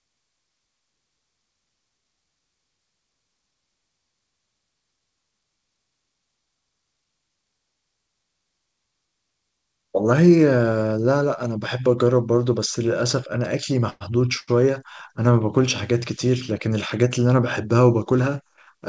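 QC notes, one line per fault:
13.90–14.03 s, call audio freeze: the sound stops moving forward for about 106 ms. The last sound is carried on as a short fading buzz or hiss that sinks to near silence for roughly 10 ms before the audio picks up exactly where it left off. Nothing is skipped; a pause has been inserted instead. The likely cause is packets held up in transit, so the jitter buffer ran dry and the receiver filled the wait with a decaying continuation of the final sound.
14.39–14.49 s, short stall from a late packet: a single sound is drawn out for about 81 ms too long, with a slight buzz or dip, then the audio resumes from the same point with nothing lost. One packet had not arrived when its turn came, so the emptied jitter buffer made the receiver stretch the preceding sound until it showed up, adding that much delay.
18.11–18.58 s, jitter buffer speed-up: over this half second the speech runs about 10% fast at unchanged pitch and sounds rushed. 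The buffer was holding more audio than its target, so the receiver trimmed tiny pitch-period-length slices back to back, removing around 50 ms in total, to pull the delay back down. The surrounding audio shows the call codec's coding noise and no content above 8 kHz, which fits G.722 at 64 kbps.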